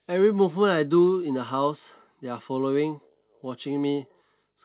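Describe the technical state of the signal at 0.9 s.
At 0.9 s the speech is intact, carried cleanly through the WebRTC call path with its G.711 mu-law coding and nothing above 4 kHz.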